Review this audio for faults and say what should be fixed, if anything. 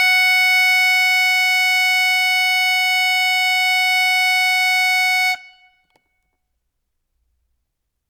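Nothing to fix here: no faults turn up anywhere in this music clip.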